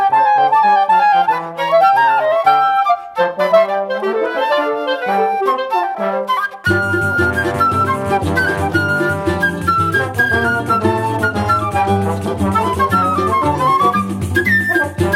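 Nothing stood out as a technical problem on listening to the audio.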